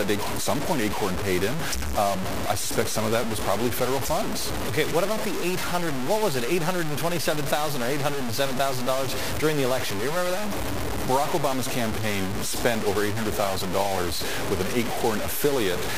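Throughout, the audio shows low bit depth without dither: grainy distortion nearly as loud as the signal, tracking it, likely from truncation to about 4 bits.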